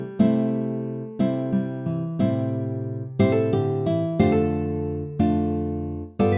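Nothing stood out as wrong on listening to this audio.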